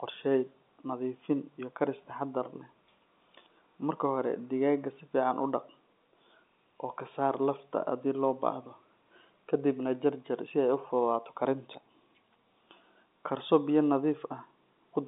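There are no technical faults to describe in this speech, which carries the narrow band of a telephone line with nothing above 3.8 kHz.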